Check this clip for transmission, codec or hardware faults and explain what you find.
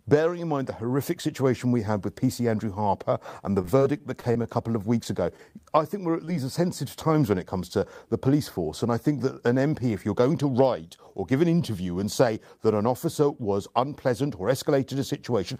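Two kinds of transmission fault are present, both packet loss on the speech path that the receiver has patched over.

Repeated packet loss (robotic sound) runs from 3.61 to 4.46 s, starting right after "and the". Seven short holes land within under a second, the longest about 26 ms. Each is bridged by extending the preceding sound, so roughly 15% of that stretch is synthetic continuation. The speech turns choppy, with fragments missing. What separates this from an isolated dropout is the density: the gaps follow each other closely, each hole coming soon after the last.

Short concealed packet loss occurs three times, each an isolated hole of about 20 ms. The first is at 5.03–5.07 s, just before "ago I think we're". The second is at 5.37–5.40 s, just before "I think we're at". The third is at 6.25–6.29 s. Each time the decoder carries the last sound forward, from its pitch if voiced or as shaped noise if not, then blends back into the real audio. 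Each is heard as a brief smear or wobble. Unlike the robotic stretch, these stand alone.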